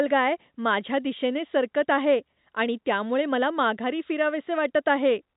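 No technical faults can be heard in the speech, which comes through G.711 telephone coding with nothing passing above 4 kHz.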